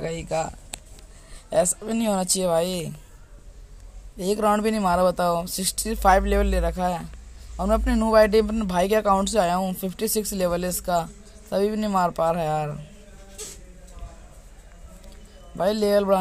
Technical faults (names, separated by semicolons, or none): none